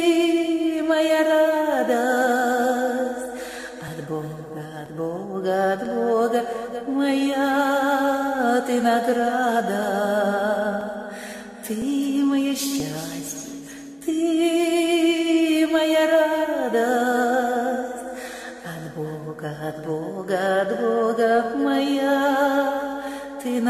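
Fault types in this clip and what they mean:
overlap between stream segments: overlapping 1 s segment timestamps make the player drop 5 to 19 milliseconds of audio at eight of the boundaries, heard as tiny skips from 3.88 to 12.8 s.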